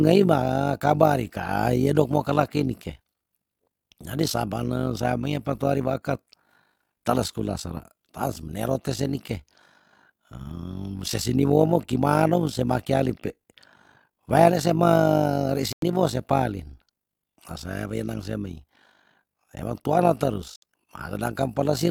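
Right through the speech there's overlap-add ripple: frames were rejoined with uneven overlap, so the level pumps by about 11 dB around fifty times a second, giving a rough robotic flutter. Then come two digital broadcast dropouts, at 15.73 to 15.83 s and 20.56 to 20.63 s, where the receiver muted over bad frames, leaving brief silent holes of roughly 100 and 70 ms.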